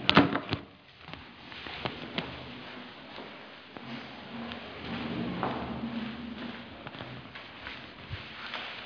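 Everyday sounds, and no technical faults are audible anywhere in the recording.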